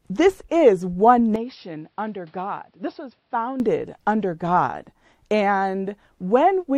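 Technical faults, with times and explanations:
1.36–3.6 s, input switched to a poorer device: right after "is one", the speech abruptly turns dull and boxy, with nothing above 5.5 kHz, and the level falls by roughly 10 dB. A faint new background hiss appears, sitting around 40 dB under the speech. There is no gap at the change. The sudden band limit, tonal shift and new noise floor are likely from the recording input jumping to a narrower-band microphone, before full-band sound returns at 3.6 s.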